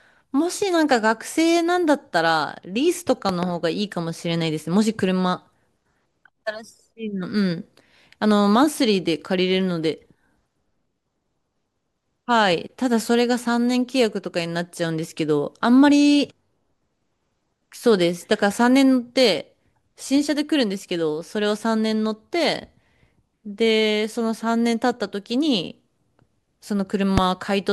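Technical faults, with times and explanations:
3.29–3.45 s, loud pop: two sharp pops in quick succession, peaking about 15 dB above the speech, which carries on underneath. A sudden voltage step, likely from a plug or switch, was added to the signal.
27.18–27.20 s, loud pop: a single sharp pop, about 20 dB above the speech. It is likely a static discharge or driver glitch, shaped by the following circuits into a brief pulse.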